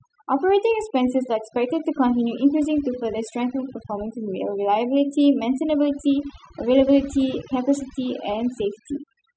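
Across the whole recording, the background drops to near silence scattered with twinkling specks. It's overdone noise removal: a too-aggressive noise reduction pass cut individual frequency bands near its noise estimate, taking quieter parts of the speech with them.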